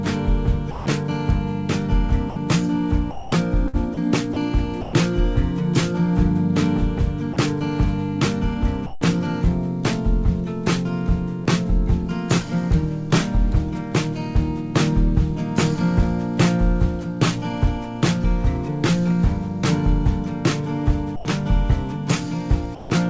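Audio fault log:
0.71–0.86, 2.30–2.36, 7.33–7.36, 8.86–9.01, 21.16–21.25 and 22.75–22.90 s, sound dropped by the voice detector: 30 to 150 ms gaps go to flat comfort noise, likely the detector mistaking sound for background.
3.11–4.93 s, sound chopped by the voice detector: about 0.44 s replaced in bits, so the audio stutters, likely from the detector toggling.
11.44–11.50 s, short concealed packet loss: roughly 30 ms never arrived, and the receiver stretched the preceding sound over it, leaving a brief smear.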